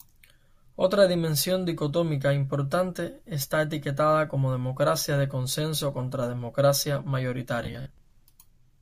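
From 7.63 to 7.98 s the speech turns into a rigid metallic buzz near 66.8 Hz: robotic sound, likely from repeating roughly 15 ms buffers, with about two fifths of the audio repeated instead of new.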